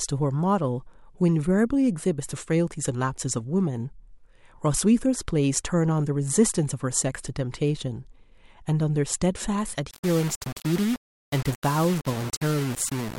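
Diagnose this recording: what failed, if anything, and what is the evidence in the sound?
A sample-format conversion likely requantised the speech to about 5 bits by rounding, without dither, from 9.91 s to the end at 13.18 s. The error tracks the signal, giving grainy distortion only about 15 dB below the speech that shifts with every syllable.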